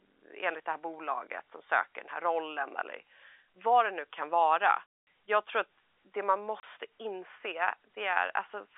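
Hard-edged holes of silence cut the speech from 4.95 to 5.06 s and again from 6.60 to 6.63 s. The gap lengths fit lost 30 ms packets, so this is packet loss filled with silence, with the receiver playing nothing where audio was missing. The G.711 telephone coding underneath keeps the narrow 300 to 3600 Hz line band.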